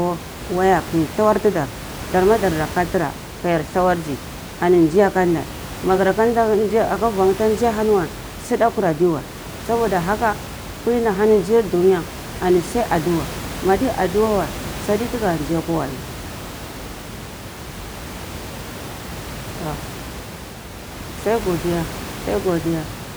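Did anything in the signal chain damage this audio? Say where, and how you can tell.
No, nothing in the chain seems to have touched this speech, and the only thing underneath it is the room's own background noise, sitting about 13 dB below the talking, which belongs to the recording and not to any stage of the system.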